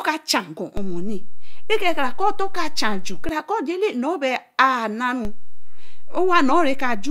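At 0.77 s a DC step hits the speech. The waveform's zero line jumps by about -17 dBFS, and a low thump marks the moment. The offset holds until 3.29 s, then falls back with a second thump. At 5.25 s another DC step of about -18 dBFS arrives with the same thud. It stays to the end. The speech carries on unchanged through both. Only the baseline shifts, as when an input with an offset is switched in.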